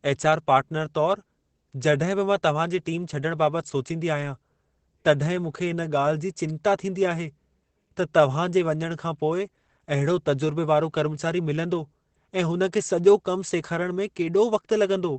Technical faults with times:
0.00-15.18 Opus voice compression

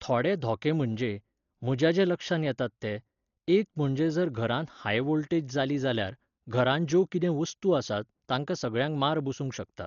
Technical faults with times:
0.00-9.86 Dolby Digital compression

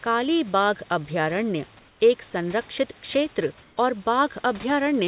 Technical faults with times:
1.79-2.00 comfort noise in place of the background
3.62-3.77 comfort noise in place of the background

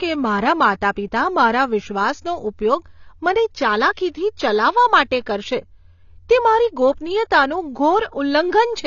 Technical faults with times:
0.00-8.87 AAC compression

